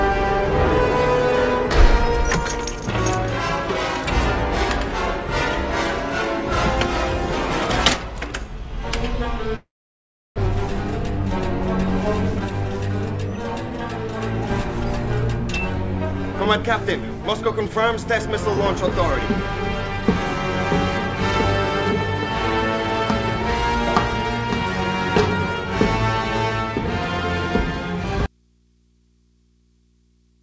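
At 9.56 s the audio stops arriving, most likely a long network dropout. The receiver fills the hole for about 0.82 s: the last sound smears on as a buzzy tail that fades, leaving roughly 0.69 s of near silence. When the audio resumes at 10.40 s it has jumped ahead, with about 0.6 s simply gone, and the timing settles with a delay shift of a couple of tenths of a second.

From 12.39 to 14.09 s the jitter buffer speed-up kicks in. The buffer is holding more audio than it wants, so the receiver repeatedly clips out tiny pitch-period-sized slices to drain the backlog. Across that stretch roughly 150 ms gets trimmed, running things at about 108% speed. The pitch stays put, but the sound feels slightly rushed and the rhythm tightens up for those 1.7 seconds.

At 28.26 s there's an abrupt cut, likely an audio dropout to a faint residue, and it runs all the way to the end. This isn't a fade or a natural pause. 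The signal just vanishes, and what's left is a low mains hum sitting around 40 dB below the normal level, the sound of a live but empty input path. Through all of this the call codec's band limit holds, with nothing above 8 kHz.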